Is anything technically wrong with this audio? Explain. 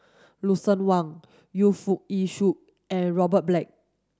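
No, nothing technically wrong can be heard here.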